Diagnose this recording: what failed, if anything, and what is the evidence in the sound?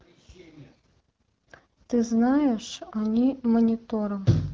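Nothing failed; no fault can be heard in this speech.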